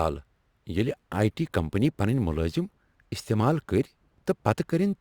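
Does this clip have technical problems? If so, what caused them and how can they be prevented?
Yes. Crude rate conversion runs through the whole speech clip: samples were simply repeated rather than filtered, which fits a 44.1 kHz to 48 kHz jump. That leaves a gritty, inharmonic fizz riding on louder, brighter syllables, roughly 30 dB down. To prevent it, use a proper band-limited resampler.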